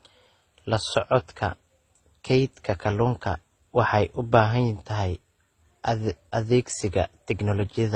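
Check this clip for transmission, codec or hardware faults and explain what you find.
There is one codec fault. Throughout, the speech shows transcoding between lossy codecs, likely an MP3, Opus and HE-AAC chain: nothing sounds above 9.7 kHz, and several distinct artefact types blur together, unlike single-codec smearing.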